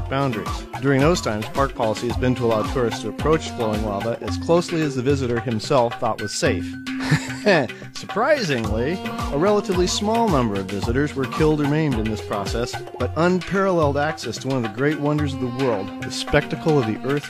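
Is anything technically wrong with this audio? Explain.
No, nothing technically wrong can be heard anywhere in this audio.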